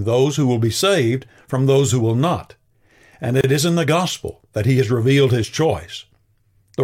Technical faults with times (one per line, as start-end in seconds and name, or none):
3.41-3.44 gap at a join of encoded pieces